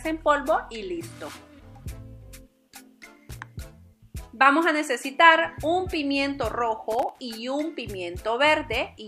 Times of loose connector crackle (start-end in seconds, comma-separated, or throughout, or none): 3.29-3.39, 6.92-7.20